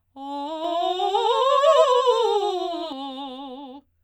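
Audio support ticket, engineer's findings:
Music doubled, 0.64 to 2.92 s: second full-band copy at roughly equal level, trailing by around 100 ms. Clean slapback, no decay or room tone; cuts in and out abruptly. Doubled audio track, likely a slower second capture path mixed in.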